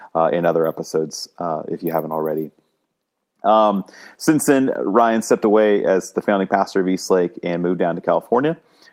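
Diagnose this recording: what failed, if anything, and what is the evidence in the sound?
Nothing stood out on listening to this speech recording that would point to a failure at any stage of the chain.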